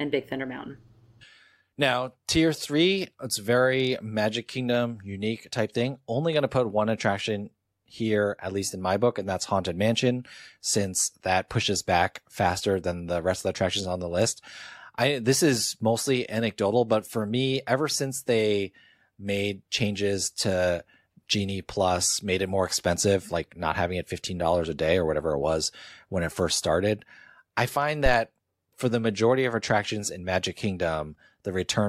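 A speech clip with one phantom power thump. It lands between 28.06 and 28.17 s, right after "first started I find" and before "for the majority of". It is a deep, low thump that peaks at about -11 dBFS. It dies away quickly, in about 24 ms. The sound points to a supply being switched on or off while the input was live. That sudden voltage step passed through the coupling capacitors and came out as this bump.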